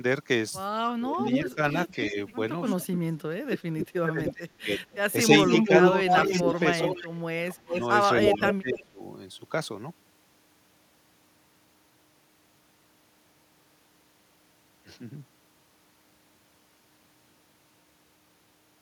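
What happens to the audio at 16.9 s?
At 16.9 s the speech carries on intact, with no audible fault at that moment.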